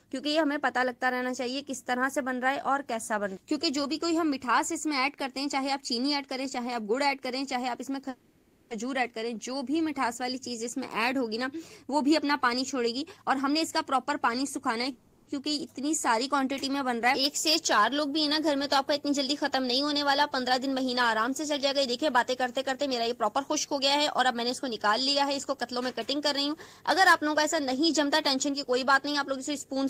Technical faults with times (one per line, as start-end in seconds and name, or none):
8.09-8.72 call audio freeze
12.86-14.89 jitter buffer speed-up
14.92-15.29 call audio freeze
22.69-29.73 jitter buffer speed-up